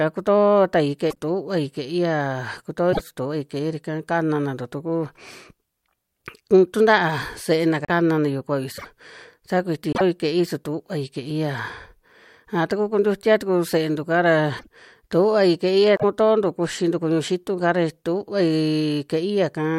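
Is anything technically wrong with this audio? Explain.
Yes. The speech skips ahead with short garbled glitches at 1.09–1.17, 2.92–3.0, 7.84–7.90, 8.77–8.86, 9.93–10.01, 14.58–14.67 and 15.95–16.04 s. That's likely a broken MP3 bit reservoir: frames went missing, and the next few, at about 24 ms each, pulled borrowed data from the wrong frame.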